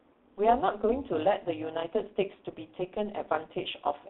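A metallic buzz, with extra tones around the voice, runs through the whole speech, the level pumping by about 11 dB at around 200 Hz. This is overlap-add ripple: frames were rejoined with an overlap that doesn't sum to constant gain.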